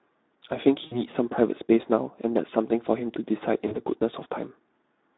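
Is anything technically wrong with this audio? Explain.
Yes. Two faults are audible.

Throughout, the speech carries Speex codec damage. The band runs from 250 Hz to 3.7 kHz. The damage fits a low Speex setting near 11 kbps, where too few bits describe the excitation. The speech sounds noisy and hoarse.

VoIP packet loss concealed by the speech codec occurs at 0.85 to 1.0 s, about 60 ms lost, and at 3.68 to 3.77 s, about 40 ms. The decoder extends its last pitch and filter while fading the level. Each gap is stretched into a buzzy tone or a coloured noise that dwindles, and the speech stays weak briefly afterwards.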